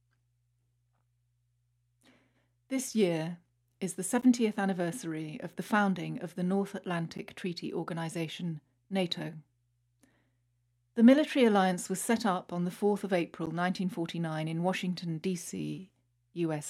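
A short tick breaks the speech at 4.21 s, between "year is the" and "anniversary of the founding", and again at 7.18 s and 13.46 s. Each is a block of digital silence about 11.6 ms long, which fits a 512-sample buffer that the program did not fill in time, so zeros went out instead. The speech drops straight to silence and straight back with no fade, and those abrupt edges produce the tick.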